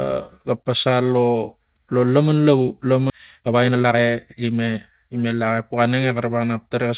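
At 3.1 s the speech jumps forward. This is a skip ahead. About a second of audio never plays, and nothing fills the hole. The receiver dropped a stretch while later audio was already queued. The two sides meet almost directly, so the cut is abrupt. The delay shrinks by roughly the same second. The sound simply resumes further along, with part of the sentence gone.

From 3.18 s to 5.41 s comes a jitter buffer speed-up. The buffer was holding more audio than its target. To drain it, the receiver cut out many tiny pieces, each a pitch period or a few long. In total about half a second is removed. The speech runs at 122% speed, yet the pitch stays the same. It sounds hurried through this stretch. Throughout, the band stops at 4 kHz, which fits a G.711 mu-law call path.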